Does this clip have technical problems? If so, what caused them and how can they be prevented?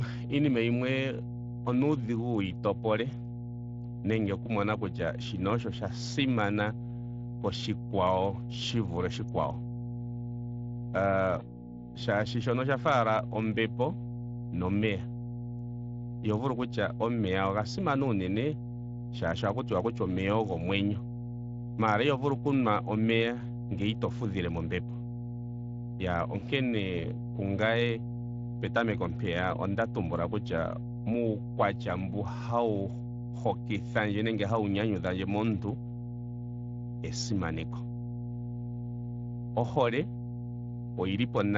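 Yes, three of them.

There's a steady 60 Hz mains hum under everything, quite strong at roughly 10 dB below the speech, from a ground loop or nearby transformer leaking power-line current into the signal. Break the ground loop with an isolator or move the cabling away from power supplies.

The Speex codec damage is plainly audible throughout. The speech sounds hoarse and noisy, as Speex runs short of bits to model the excitation, which fits a mid-rate setting around 20 kbps. Use a higher Speex quality setting or a more modern codec like Opus.

There's VoIP packet loss concealed by the speech codec at 11.39–11.65 s and 26.39–26.43 s. Each sounds like a single lost 20 ms frame, which the decoder filled by extrapolating from the last sound and fading it out. The longer first dropout shows the voice taking time to recover afterwards. A steadier network path and a jitter buffer with forward error correction would prevent it.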